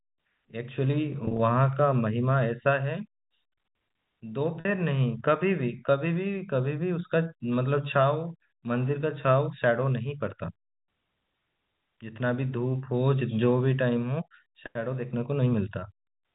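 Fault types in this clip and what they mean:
packet loss with pitch repetition: at 1.25 to 1.39 s and 4.60 to 4.65 s, the receiver fills missing speech by looping the last pitch cycle, causing a brief held, buzzy tone. The first loss is broken runs up to 30 ms across 140 ms; the second is one 50 ms gap.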